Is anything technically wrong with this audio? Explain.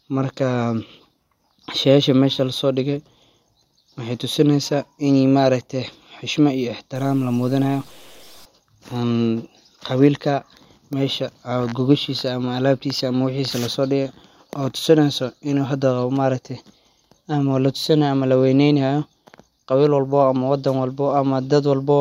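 Yes, one thing. From 6.95 to 8.45 s the speech goes grainy and sputtery, likely low bit depth without dither, fitting 8-bit truncation, so the error tracks the signal.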